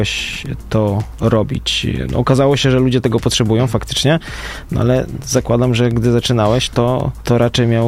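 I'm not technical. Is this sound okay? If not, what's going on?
Yes, no faults to report.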